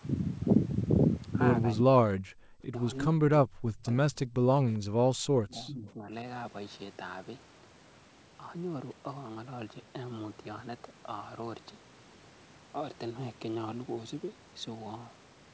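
A speech recording in which the talker's voice repeatedly sinks or breaks up, dropping away at 1.83 to 2.26 s, 2.42 to 2.53 s, 2.70 to 2.79 s, 3.08 to 3.81 s and 4.96 to 6.11 s. The deepest cuts reach roughly 40 dB, and the 2.70 s dip is shallower at about 20 dB. This pattern of speech suppressed in double talk is likely caused by both ends talking at once, so that the echo canceller could not tell the near talker from the loudspeaker echo and turned the whole signal down. At 4.32 to 4.44 s the room sound briefly ducks by about 39 dB for roughly 70 ms and then returns. That is background gated by the echo canceller: while far-end sound played from the loudspeaker, the canceller clamped the microphone hard and then released it. From 5.49 to 5.92 s, within the longest suppressed stretch, a faint delayed copy of the voice trails the original by 397 ms, about 15 dB below the speech. This echo leak likely comes from a loudspeaker-and-microphone setup at one end, where the canceller failed to remove all of the loudspeaker sound and sent the residue back down the line. 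Throughout, the audio carries nothing above 8 kHz, consistent with the band limit of a wideband call path.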